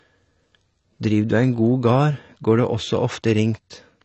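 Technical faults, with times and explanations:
Throughout, AAC compression: the speech stops sharply at 8.1 kHz and carries plainly audible smearing, not a clean low-pass dullness; likely AAC-LC at a rate fitting 24 kbps.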